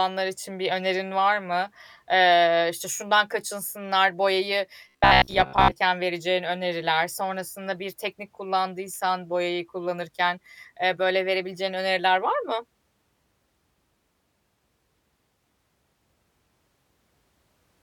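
From 4.89 to 5.73 s, between "işte şundan kaçınsınlar boyayı" and "vereceğin öneriler", the speech turns into a rigid metallic buzz near 66.7 Hz: robotic sound from repeated short buffers, likely from a roughly 15 ms block being replayed while about half the real audio is skipped.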